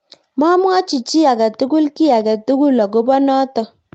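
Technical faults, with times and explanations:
No technical faults found; the speech carries the usual call microphone processing, with the lowest bass trimmed and nothing above 8 kHz.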